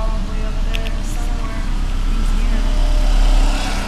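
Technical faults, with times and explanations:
Throughout, doubled audio track: a full-band copy trails roughly 100 ms, about 5 dB down, lacking echo's decay and room colour, likely a second capture.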